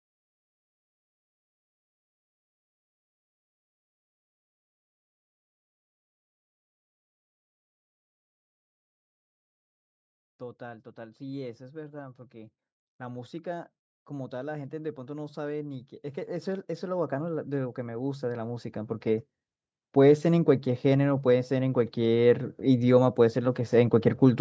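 From 10.39 s to 19.32 s there's automatic gain rising: the call's gain control decides the speech is too quiet and slowly cranks up by about 18 dB, so voice and room noise swell together. It happens again, smaller, from 19.93 s to 22.44 s, about 5 dB.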